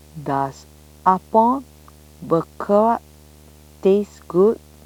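A screen or its video cable is coupling into the audio path for the whole clip, producing video or display buzz: a steady 75 Hz buzz tied to the picture's field rate, with a fizzy hash above it, sitting roughly 30 dB beneath the speech.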